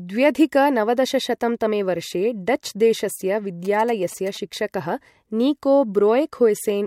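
From 3.65 to 4.37 s, GSM signalling bursts cut into the speech as a galloping dit-dit-dit of short 217 Hz buzzes, some 20 dB below the voice. A nearby phone's radio bursts get rectified in the circuit. Unlike steady mains hum, it comes in gated clusters.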